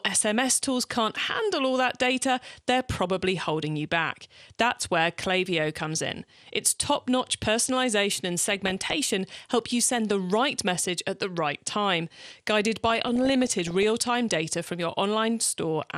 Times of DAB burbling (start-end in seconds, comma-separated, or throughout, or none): 8.51-8.94, 12.90-13.90